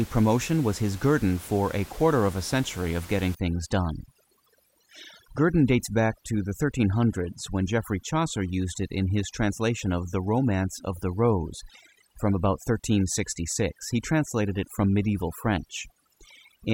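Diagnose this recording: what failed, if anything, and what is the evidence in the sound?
Call processing: overdone noise removal from 3.35 s, after "a century of getting", onward. Bands near the noise estimate are zeroed. Spectrogram shows speckled gaps.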